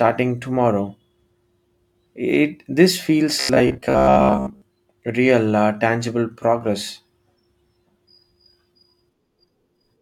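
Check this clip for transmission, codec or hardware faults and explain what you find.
One fault is present. From 3.40 to 4.62 s, the speech turns into a rigid, metallic buzz at 66.7 Hz. This is robotic sound from repeated short buffers. Audio likely arrived too seldom, so 15 ms chunks were replayed through most of that span.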